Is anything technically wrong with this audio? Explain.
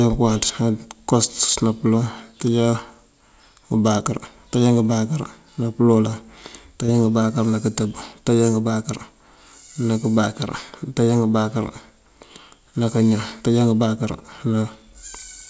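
Yes, there are two faults in this speech, heard through a G.722 call path whose spectrum stops at 8 kHz.

From 1.15 to 1.54 s there is hard clipping. The signal is driven about 6 dB past what a stage can pass, so peaks are sliced flat and rough crackle rides the loud syllables. The waveform shows squared-off tops, and the spectrogram shows smeared harmonic energy reaching toward 8 kHz.

From 6.86 to 6.90 s there is short concealed packet loss. A 20 ms gap, which fits one lost packet, was filled by extending the preceding sound before blending back. It is heard as a brief smear or wobble. The spectrogram shows a short stretch of blurred, repeated texture, and the waveform shows a soft seam at the join.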